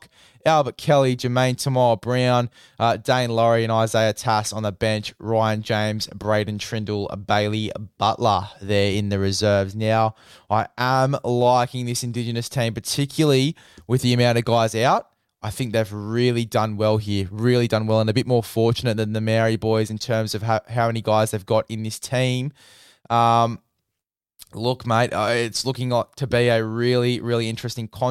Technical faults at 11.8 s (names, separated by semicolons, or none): none